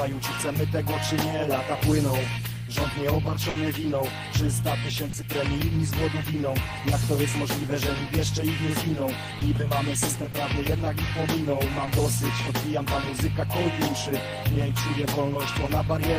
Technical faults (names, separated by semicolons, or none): burst of packet loss; short concealed packet loss